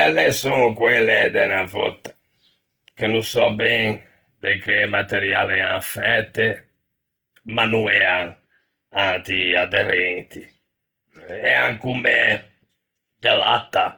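Speech throughout carries plainly audible Opus compression: a grainy, rough texture rather than MP3-style swirling, with bandwidth intact to 20.1 kHz, likely from a bitrate near 16 kbps.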